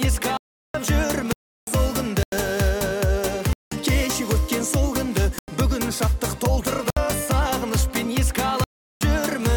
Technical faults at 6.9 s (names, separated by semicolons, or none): block of digital silence